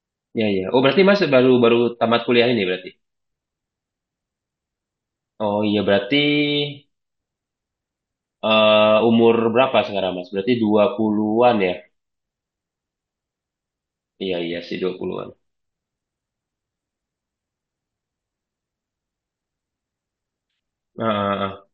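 A careful listen to this speech recording turned up nothing that stood out as a technical problem.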